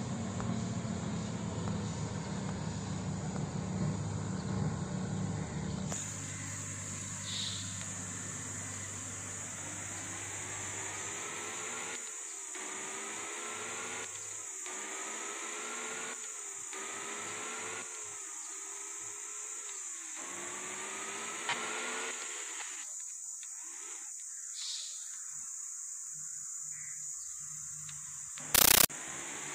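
At 28.55 s the sound gives way to harsh, very loud chattering static until 28.90 s. This is a compressed stream played as audio. An encoded Dolby Digital (AC-3) bitstream reached the output as if it were ordinary samples, with no decoding. Each data frame plays as a 13.3 ms burst of noise, then silence from padding. The bursts repeat 31.25 times a second, giving the rapid rattle. The density of the bursts fits a high-rate stream, around 640 kbps.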